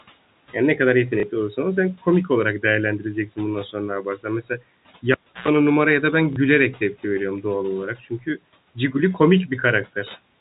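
At 1.2 s and again at 6.33 s there is a small blip, lasting about 30 ms each time. This is packet loss with the last packet repeated. A single packet's worth of audio went missing, and the receiver filled the gap by replaying the previous one.

From 4.03 to 4.25 s, and again from 7.99 to 8.38 s, parts of the speech sound swallowed and faint, dipping by up to about 11 dB. This is speech cut by the noise suppressor: it mistook quiet speech for background noise and turned it down. The first cut covers roughly a tenth of a second and the second roughly a fifth.

From 5.12 to 5.48 s a pop gives way to near silence for about 314 ms. Within that, a 60 Hz mains buzz bursts in for about 110 ms, and a second pop brings the sound back. This is a cable pulled and plugged in: the live lead came out, hummed while only the tip made contact, then seated again.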